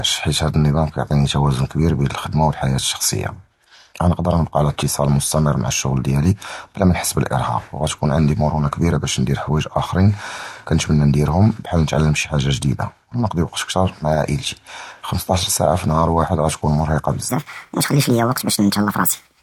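A speech recording whose final stretch, from 17.29 s to the end, suddenly turns hurried and high, jumping up by roughly seven semitones. That is a section at the wrong speed, playing 1.43 times too fast, likely because it was clocked at the wrong rate, raising speed and pitch together.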